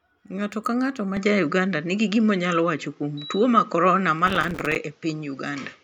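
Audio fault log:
1.17–5.84 s, input switched to a poorer device: The recording most likely moved to a different, lower-grade input at 1.17 s, with no gap at the changeover. From there the speech loses everything above 7.6 kHz and turns duller and less crisp. The level shifts by around 5 dB, and a new background noise floor appears, sitting roughly 40 dB below the speech. Together these give the rest of the clip a different, boxier character.
4.27–4.76 s, processor overload crackle: For about half a second the audio processing falls behind and repeatedly misses its deadlines. Each missed block is replaced with silence, so the speech is chopped by a few dozen tiny dropouts, each lasting a few milliseconds, which fits a buffer of around 3 ms. The hard edges at every dropout run together into a gritty, tearing crackle over the speech. It stops once the load eases at 4.76 s.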